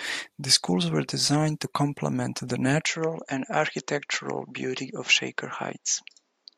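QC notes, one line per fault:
2.87–6.58 s, input switched to a poorer device: from 2.87 s to the end the speech suddenly loses its top, with nothing above about 7.6 kHz, so it turns duller and a bit boxier. There's no gap at the change and the level holds steady, but a faint new noise floor sits well under the speech. That points to the recording likely jumping to a narrower-band mic or a headset's call profile.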